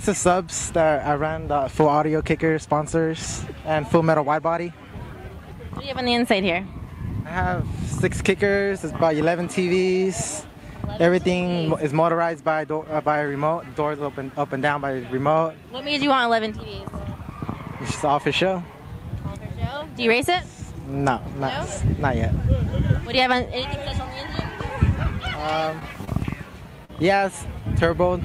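Short concealed packet loss at 25.79–25.83, 26.05–26.09 and 26.85–26.91 s. About 20, 20 and 40 ms went missing. Extrapolated fill leaves brief smears.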